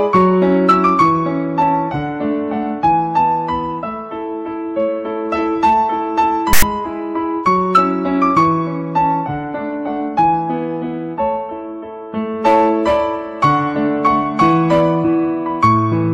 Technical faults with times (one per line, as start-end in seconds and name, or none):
6.53-6.62 file tags played as audio